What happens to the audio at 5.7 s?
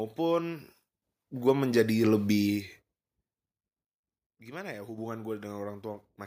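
Nothing goes wrong at 5.7 s: the speech continues intact there.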